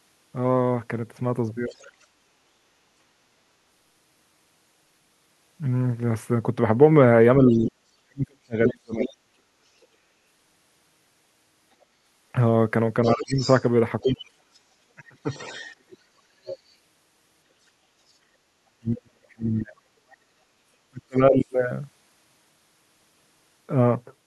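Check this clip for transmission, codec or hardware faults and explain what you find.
Two echo-control faults appear in this speech clip: a far-end voice bleeding into the signal and the near talker being squashed whenever both sides speak.

Other side's voice leaking through, at 1.68–2.04 s, 7.48–9.86 s, 13.03–16.58 s and briefly at 20.10–20.16 s. A faint second voice sits roughly 15 to 35 dB under the talker, likely residual loudspeaker echo the canceller missed. Unlike line crosstalk, it comes and goes with the far end.

Speech suppressed in double talk, at 7.37–9.30 s, 13.05–15.54 s and 18.45–21.45 s. The talker's level dips by up to roughly 40 dB, for one to two seconds in total per stretch, likely because the canceller turned everything down during overlap. Unlike packet dropouts, the gaps track the other voice.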